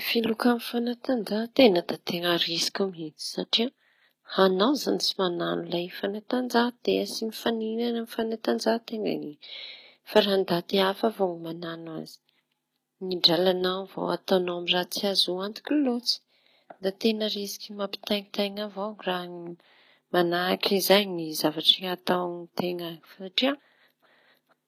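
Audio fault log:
Throughout, HE-AAC compression, likely the cause. The damage is plainly audible across the speech. The lower spectrum sounds coded directly, while the treble reaches high but sounds synthetic. That points to spectral band replication: lower bands are copied upward and shaped by a rough envelope. The copied harmonics fail to line up above the crossover, so s sounds come out gritty, metallic or lispy. The plainly audible damage fits a low bitrate around 24 kbps.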